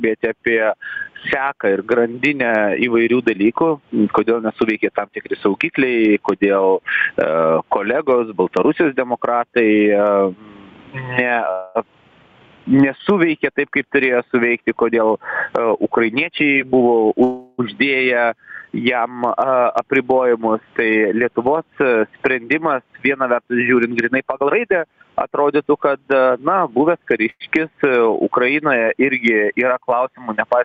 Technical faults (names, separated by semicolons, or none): gain pumping; call audio freeze; jitter buffer speed-up